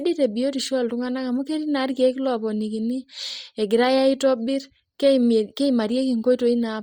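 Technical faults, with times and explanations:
Throughout, Bluetooth LC3 compression: heavily grainy, breathy speech from zeroed, noise-filled upper bands, likely from a 32 kbps link. The spectrogram shows 10 ms blocky texture and nothing above 20.4 kHz.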